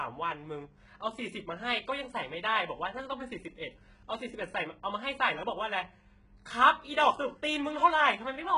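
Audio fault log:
Throughout: HE-AAC compression, likely at a very low bitrate around 12 kbps. Rebuilt treble stops near 11 kHz, making s sounds gritty and metallic, harmonics misaligned above the crossover.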